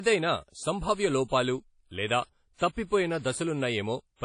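Throughout, the speech rings and smears, with hiss that breathes with the signal and nothing above 10.1 kHz. This is likely WMA compression at a low bitrate, around 32 kbps.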